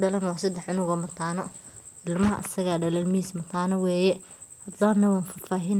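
At 0.84 to 0.89 s and again at 1.53 to 1.65 s, a faint echo leak appears. A copy of the speech returns 145 ms late, around 40 dB down. The likely cause is a far-end loudspeaker whose echo canceller let residue through.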